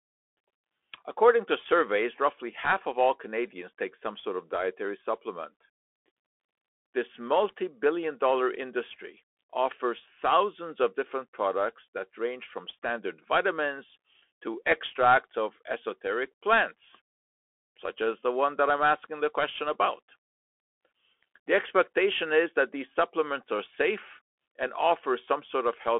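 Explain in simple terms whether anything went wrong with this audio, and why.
Yes, something went wrong, and it lasts from start to finish. The speech sounds thin and boxy, like a phone call, with a rough, grainy edge to it. That is the Bluetooth CVSD headset codec at work. It squeezes the sound into a narrow band, keeping roughly 300 Hz to 3.4 kHz, and nothing above about 3.8 kHz gets through. It also describes the waveform very crudely, as a rapid stream of simple up-or-down steps, which leaves plainly audible damage on the sound.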